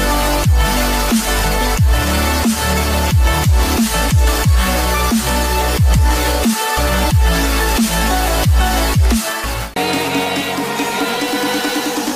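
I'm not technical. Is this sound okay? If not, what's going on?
Yes, nothing stood out as a problem when listening to this sound.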